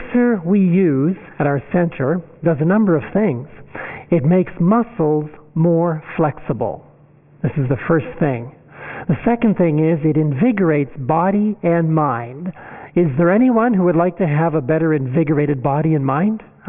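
No technical faults can be heard anywhere in the audio; the signal stays continuous and stable throughout.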